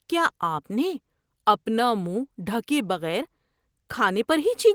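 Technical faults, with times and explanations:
No technical faults can be heard in this speech recording. There is nothing here that needs a time or an explanation.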